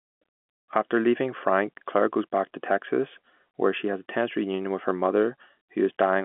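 No faults; the speech sits in the ordinary telephone band of roughly 200 Hz to 3.4 kHz, with nothing above about 3.8 kHz, as expected of G.711 mu-law coding.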